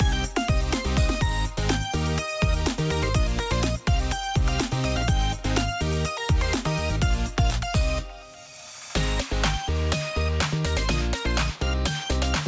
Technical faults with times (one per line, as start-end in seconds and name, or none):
none